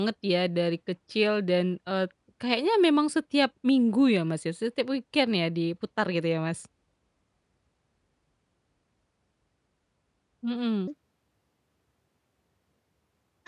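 From 10.88 s to the end at 13.48 s, the speech has a wrong sample rate fault. It runs about 1.45 times fast and sits roughly 6.5 semitones high, sounding hurried and thin. This fits samples captured near 22 kHz being played at 32 kHz without conversion.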